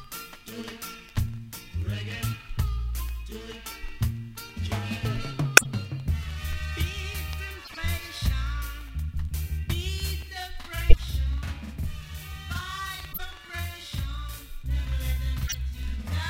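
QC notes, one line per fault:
5.57 s, 7.64 s, 10.81 s, 13.12 s, 15.47 s: corrupt frame decoded. Five short bursts, each about 80 to 190 ms long, where the decoder played damaged compressed frames instead of hiding them. Flipped bits scramble the gains and codes, so energy lands at the wrong frequencies and you hear a chirpy blip or noise burst. The ones at 5.57 s and 10.81 s are the strongest. The others sit lower, roughly -25, -20 and -15 dBFS.
10.22 s to the end: channel delay (doubling). From here one channel runs about 46 ms behind the other, which fits a 2048-sample buffer at 44.1 kHz, and the two are folded to mono. At that gap the late copy doesn't fuse with the original, so everything gets a same-level slap or doubled attack.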